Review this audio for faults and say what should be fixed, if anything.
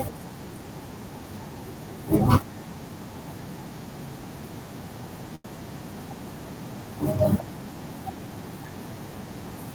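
From 5.35 to 5.47 s one sound in the speech hangs on unnaturally, held too long, then the talker resumes exactly where they left off. This is a short stall from a late packet: the jitter buffer emptied, and the receiver stretched the last audio for 90 ms until the packet arrived, so nothing was lost but everything after runs 90 ms later. A deeper or adaptive jitter buffer would absorb this kind of late arrival.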